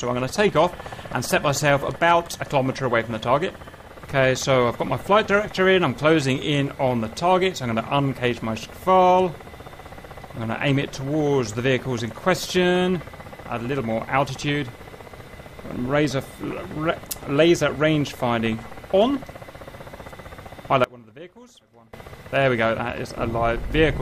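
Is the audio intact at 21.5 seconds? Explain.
No. From 20.84 to 21.93 s the sound drops about 23 dB to a faint remnant, likely one channel inverted, cancelling shared content when summed to mono.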